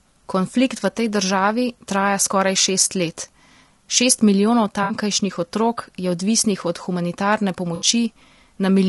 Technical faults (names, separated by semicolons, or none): low-delay AAC compression; AAC frame loss with concealment